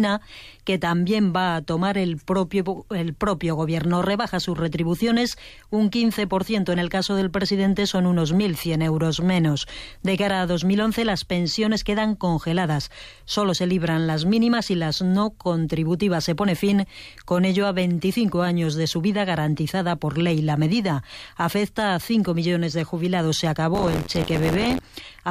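From 23.74 to 24.79 s there's buffer tearing, an 86.1 Hz buzz that fits a 512-sample buffer, with part of each period replaying older audio.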